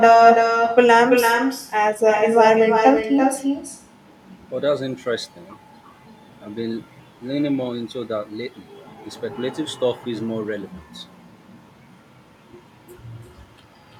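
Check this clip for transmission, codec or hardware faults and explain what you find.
One fault runs through the whole recording: echo with no canceller. At the far end the call plays over a loudspeaker, its microphone captures it, and nothing strips it out, so the speech returns after roughly a third of a second, about 7 dB quieter, as a thinner shadow trailing every phrase.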